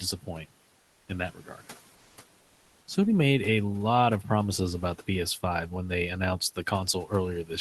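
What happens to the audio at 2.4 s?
From 2.43 to 2.87 s the sender has likely stopped transmitting during a pause, under Opus discontinuous transmission, and the receiver fills the 440 ms gap with comfort noise in place of the background. The room's real background, which sits about 39 dB below the loudest speech, is replaced by a steady, featureless hiss about 2 dB quieter, so the texture of the room flattens briefly before the genuine background returns with the sound.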